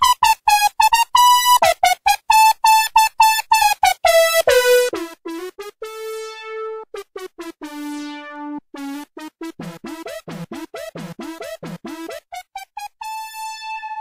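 No technical faults can be heard anywhere here.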